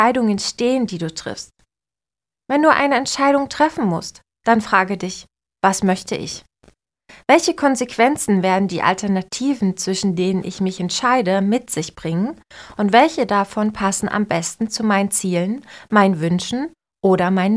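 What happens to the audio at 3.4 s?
Nothing goes wrong at 3.4 s: the speech runs through that moment intact, with no dropout, click or distortion.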